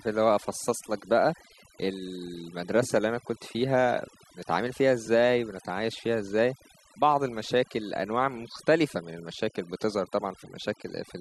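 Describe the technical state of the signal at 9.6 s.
At 9.6 s the speech carries overdone noise removal, present across the whole clip. Noise reduction set too aggressively shuts down individual frequency bands that fall near its noise estimate, so the background drops to near silence sprinkled with twinkling specks, and quieter parts of the voice vanish with it. On a spectrogram the gaps between words look nearly empty apart from scattered isolated dots, and the harmonics show a patchy, holed texture.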